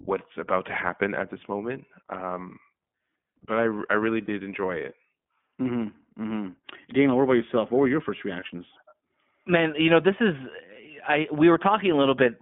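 Throughout the clip the speech has passed through the iLBC codec, a narrowband VoIP coder that encodes each 20 ms frame's excitation independently of the previous frame. The line passes only about 150 Hz to 3.5 kHz, so the speech sounds thin and muffled with nothing above 4 kHz. The coding damage is plainly audible as a rough, slightly synthetic texture, which fits iLBC's 15.2 kbps mode.

At 4.26 to 4.30 s, just before "enjoy it", packets are lost. The decoder fills the gap by repeating the last pitch cycle mixed with noise, which sounds like a brief, slightly buzzy held vowel about the length of a single 20 ms frame. Because iLBC frames do not depend on one another, the speech is clean again almost immediately. The same concealment happens at 8.40 to 8.44 s, right after "were your first", again as a short buzzy smear that recovers at once.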